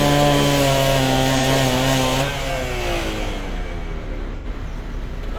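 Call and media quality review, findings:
AAC frame loss with concealment. Decoder missing frames and patching the gap from the last good spectrum, with sign-scrambled or interpolated content. At 1.38–1.43 s, a brief smeared, noisy patch whose length fits a single lost frame. At 4.36–4.46 s, a longer phasey, blurred stretch, about twice as long, consistent with two consecutive frames dropped.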